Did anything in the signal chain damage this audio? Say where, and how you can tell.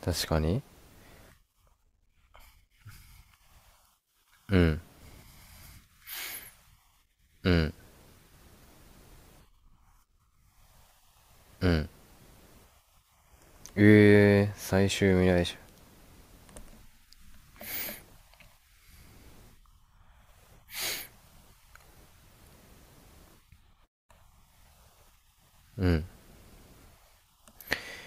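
No, nothing in this speech recording stood out on listening as a sign of damage anywhere along the signal chain.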